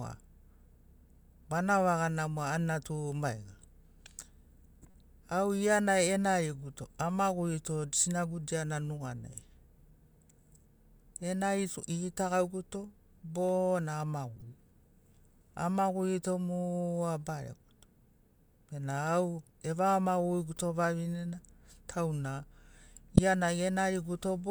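Corrupt frames are decoded at three points in the speech. From 4.82 to 4.95 s, just before "au gia na enariguto", a faint burst of misplaced energy peaking around -40 dBFS spans roughly four frames. After "bo na", 14.36 to 14.42 s brings a similar short blip near -35 dBFS. At 23.16 to 23.19 s a much louder chirp, near -10 dBFS, hits about two frames. Each time, damaged frame data was decoded as valid, scattering energy to wrong frequencies.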